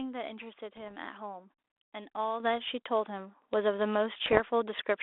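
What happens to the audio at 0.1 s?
At 0.1 s the audio is intact, carrying only the light, band-limited coloration of the 32 kbit/s G.726 ADPCM telephone path it passes through.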